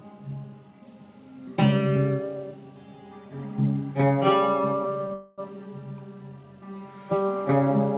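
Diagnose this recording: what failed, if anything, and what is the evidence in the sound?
Short stall from a late packet, network/jitter buffer stage: at 5.08–5.12 s the music holds one sound for about 15 ms, then resumes where it left off with nothing lost.

Call audio freeze, network stage: from 5.14 to 5.40 s the music is stretched into a fading buzz for about 0.24 s, never reaching silence, then continues. The likely cause is delayed packets draining the jitter buffer.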